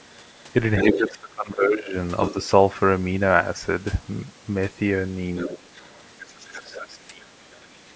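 Another voice leaks in from 0.0 to 0.43 s, very faintly, and from 0.77 to 1.1 s nearly as loud as the speech. This is other side's voice leaking through, likely echo the canceller missed. From 0.84 to 1.95 s the speech drops by up to about 20 dB, likely speech suppressed in double talk. More leaking voice comes at 2.18 to 2.45 s and 5.36 to 6.8 s, well below the speech. The same suppression returns from 6.44 to 7.44 s. A last, very faint scrap of the other voice follows at 7.52 to 7.76 s.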